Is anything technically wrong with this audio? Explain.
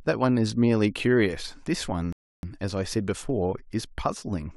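Yes. At 2.13 s there is a rebuffering stall. Playback ran dry and waited for data. The speech drops to silence until 2.43 s, then resumes exactly where it stopped, adding about 0.31 s.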